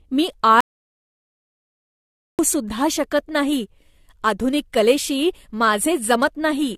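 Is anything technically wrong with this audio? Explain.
Yes, there are two faults. Throughout, the speech sounds swirly and hollow, with blurred attacks and nothing above 14.1 kHz. This is likely generation loss from several AAC re-encodes near 64 kbit/s. From 0.61 to 2.39 s, about 1.78 s drops to silence before "सुद्धा शकत". That is an audio dropout to silence, likely from a lost input link.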